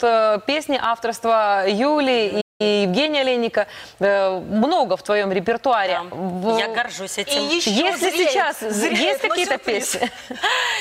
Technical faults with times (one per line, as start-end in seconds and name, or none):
2.41-2.61 playback stall